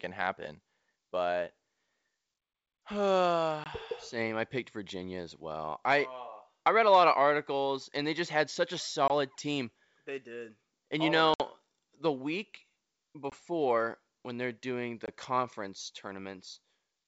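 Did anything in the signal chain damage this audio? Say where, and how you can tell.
Yes, the damage is in the network stage: packet loss on an ADPCM call. Short hard-edged silent gaps appear at 3.64, 9.08, 13.30 and 15.06 s, each about 20 ms, and a longer 60 ms gap at 11.34 s that fits roughly three consecutive packets. A waveform shows abrupt flat holes, and a spectrogram shows full-band vertical blank stripes. After each gap, the decoder's adaptive predictor and step size no longer match the sender's, so speech resumes slightly distorted and takes tens of milliseconds to settle. The G.722 wideband coding itself leaves clear speech up to 7 kHz.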